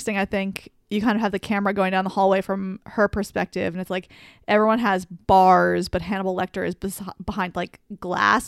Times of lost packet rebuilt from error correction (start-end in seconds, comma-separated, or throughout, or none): none